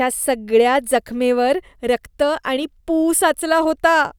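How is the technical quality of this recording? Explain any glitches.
No audible glitches or faults.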